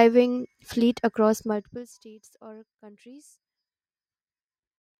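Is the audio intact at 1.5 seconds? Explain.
No. Zipper noise runs from 1.39 to 1.95 s: the gain drops roughly 20 dB in unsmoothed 2 dB steps, about 30 per second, leaving a ticking rasp just before "or countries".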